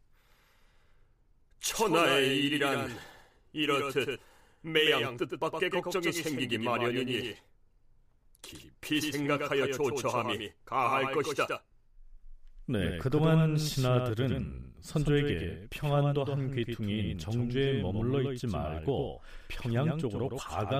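A doubled audio track runs through the whole speech recording: a second full-band copy trails the original by about a tenth of a second, sitting roughly 5 dB below it. The likely cause is the same signal reaching the mix twice, once through a slower path. Because the copy carries no decay or room colouring, it sounds like a hard, flat slapback stuck to every syllable rather than a natural echo.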